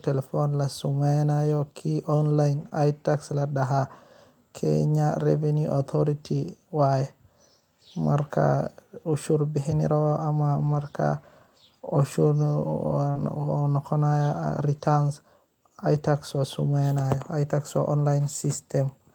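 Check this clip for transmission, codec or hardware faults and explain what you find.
Two kinds of network damage show up here, both around lost packets, and they cluster in three spots.

The lost packet rebuilt from error correction happens three times: 2.61 to 2.67 s, right after "samaynayo ki online"; 10.59 to 10.85 s, after "bahan rabah ama"; and 13.15 to 13.29 s. Packets went missing, but the following ones carried low-bitrate backup copies, and the decoder played those instead. There's no gap, but those stretches (about 40, 140 and 80 ms of rebuilt audio) sound grainier and noisier.

The short concealed packet loss shows up twice. The first is at 2.69 to 2.73 s, just after the first rebuild, with about 20 ms missing. The second is at 13.11 to 13.17 s, with about 40 ms missing, running straight into the last rebuild. No backup copy arrived for these bits, so the receiver extended the preceding sound to fill the hole and then blended back. 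You hear it as a quick smear or wobble, and a short consonant can get swallowed.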